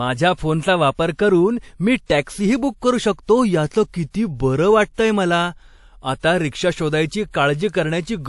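From start to finish the speech carries two layers of coding texture at once: the artefacts of different codecs heard together, with the top of the band reaching to about 20.1 kHz. The likely cause is transcoding between lossy codecs, which fits an MP3 encode at around 48 kbit/s later re-encoded as WMA at about 96 kbit/s. The second codec spent its bits preserving the first one's artefacts and added its own on top.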